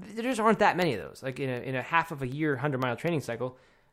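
Periodic USB or driver dropouts run from 0.07 to 3.83 s, recurring every 0.25 s. Each time, something stalls the USB bus or audio driver, and a tiny fraction of a millisecond of the speech is replaced by silence. The result is a steady ticking, four times a second, heard only over the speech.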